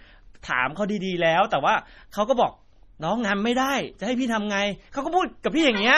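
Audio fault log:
throughout: MP3 compression. The speech has a watery, swirling quality, with metallic chirps on s sounds and smeared consonant onsets, and nothing remains above 14.4 kHz. The heavy damage fits a low bitrate of about 32 kbps, and the likely cause is an encoder short of bits. It has cut the treble at a fixed point and zeroed weak frequency lines that switch on and off between frames. A spectrogram shows a flat ceiling at 14.4 kHz and patchy, flickering holes in the quieter bands.
5.43 s: pre-echo. Just before a sharp attack, a short hiss leads in for about 13 ms, and the attack sounds softened. The encoder spreads its quantisation noise across a whole block, so the noise sized for the loud onset also fills the quiet moment before it. On the waveform, a thin band of low-level noise sits ahead of the transient where near-silence should be. The spectrogram shows a broadband haze smeared leftward from the onset.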